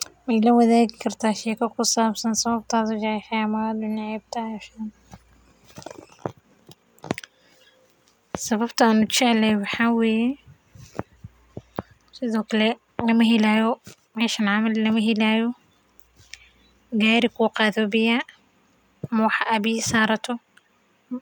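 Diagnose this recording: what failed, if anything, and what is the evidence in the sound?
Nothing failed; no stage in the chain shows a fault.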